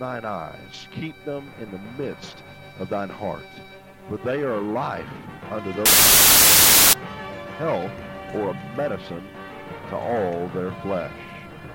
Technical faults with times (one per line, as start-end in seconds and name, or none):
5.86-6.93 samples built from the wrong bytes